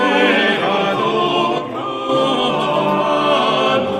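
From 1.58 to 2.09 s, one channel drops out, likely because one side of the stereo feed went silent for about half a second. In the mono sum, the shared content falls abruptly by about 6 dB, and anything carried only on the lost side vanishes until it returns.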